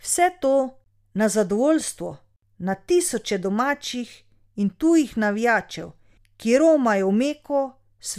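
No technical faults can be heard anywhere in the speech.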